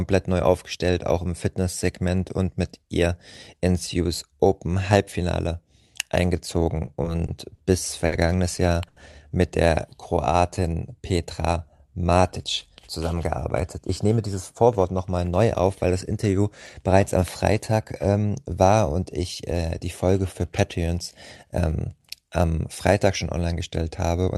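From 6.85 to 7.60 s the speech shows repeated stalls (stutter). Packets came in late four times, and the jitter buffer ran dry each time. The receiver filled about 90 ms by holding the last sound, the longest wait 40 ms. Nothing is lost, but the speech drags and catches.

At 8.06 to 8.14 s comes a short stall from a late packet. The receiver stretched the last sound for 60 ms until the packet arrived. Another follows at 8.88 to 8.98 s, 80 ms long, just before "mit der". Each gives a held sound with a faint buzz or dip.

Just after "mit der", from 10.15 to 10.75 s, a jitter buffer slow-down sets in. The receiver repeated single pitch periods to rebuild its reserve, adding 82 ms. The speech runs at 88% speed. Pitch stays the same, but sounds are drawn out.

A jitter buffer speed-up follows at 12.87 to 13.20 s. The buffer held too much audio, so short pitch periods were cut, a few tens of milliseconds in all. 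Speed rises to 109%. A second speed-up, 13.78 to 14.85 s, ends before "nochmal neu auf weil". It runs at 110% and removes about a tenth of a second. Both sound hurried at unchanged pitch, through the 12 kHz Opus call path.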